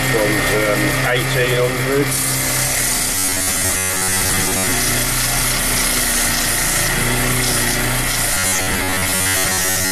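From 3.15 to 4.72 s, and again from 8.34 s to the end at 9.92 s, the sound turns into a stiff, metallic drone locked at about 94 Hz. That's robotic sound from repeated short buffers: new audio most likely arrives too slowly, so a slice of roughly 10.7 ms keeps getting replayed while most of the real material, around two thirds or more, is skipped. The loop's repetition rate becomes the fixed buzz pitch.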